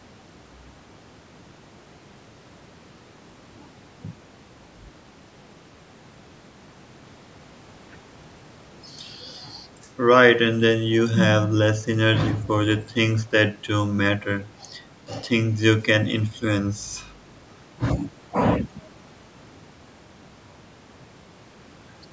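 No faults are present in the speech; the call microphone processing rolls off the lowest bass and leaves nothing above 8 kHz, both normal for that path.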